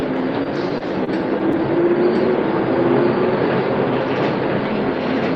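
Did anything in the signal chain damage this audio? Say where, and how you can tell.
Yes, two things. First, the whole clip carries a doubled audio track: a second full-band copy sits roughly a second behind the original at about the same level, with no decay or room colour on it. That clean, fixed offset points to the same signal getting mixed in twice, most likely at the capture or editing stage, where a slower second path, or an edit, leaves two copies running out of step.

Second, there are repeated stalls (stutter) between 0.43 and 1.56 s, in the network and jitter-buffer stage of the call path. Six times in that stretch the buffer ran dry and the receiver stretched the last sound to cover, about 99 ms in total. The longest hold is 25 ms. Nothing actually drops out, but the sound drags and hiccups, because packets were arriving late or slower than playback.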